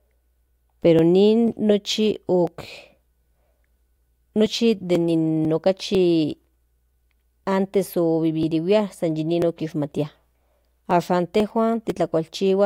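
From 0.49 s to 12.40 s the speech carries periodic USB or driver dropouts. About every 0.496 s something stalls the audio path and a few milliseconds of signal are skipped outright, so the waveform jumps straight across a discontinuity with no silent gap. There are around thirty regular ticks, heard only while speech is present. A spectrogram shows them as evenly spaced, thin vertical broadband lines, roughly two per second.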